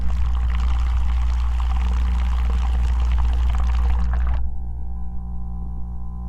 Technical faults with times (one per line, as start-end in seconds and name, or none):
none